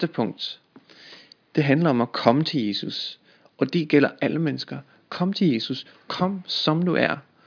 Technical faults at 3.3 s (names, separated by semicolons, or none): none